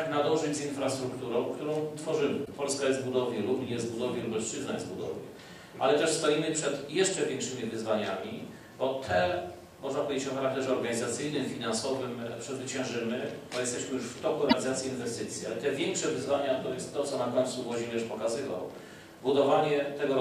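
At 2.42 to 2.49 s, and again at 14.46 to 14.53 s, there is a brief burst of damaged data in a compressed stream. Each lasts about 70 ms. Corrupted bytes threw the decoder off its frames, and it lost sync. Each is heard as a short glitch.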